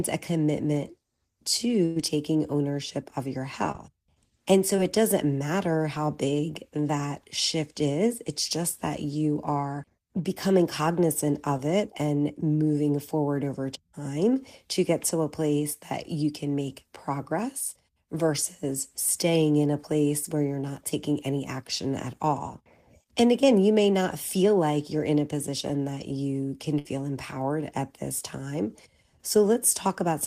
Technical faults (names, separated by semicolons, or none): burst of packet loss; short concealed packet loss